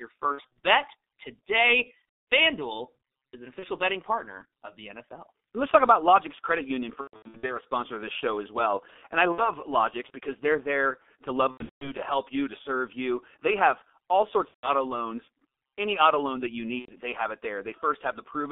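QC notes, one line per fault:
throughout: G.723.1 codec. Speech is confined to roughly 250 Hz to 3.7 kHz and heavily coded, so it sounds muffled and hoarse with smeared consonants. The coarse 30 ms frame updates of the voice model fit a 6.3 kbit/s G.723.1 mode.
0.32–0.55 s, 2.33 s, 3.59–3.66 s, 7.01–7.56 s, 9.32–9.50 s, 11.51–11.92 s, 14.48–14.69 s, 16.79–16.95 s: VoIP packet loss concealed by the speech codec. The decoder repeats its last pitch and filter at falling gain, giving buzzy, fading stretches and weak speech just afterwards. The heaviest bursts are at 7.01 s (about 360 ms lost, longest run 120 ms) and 11.51 s (longest run 180 ms).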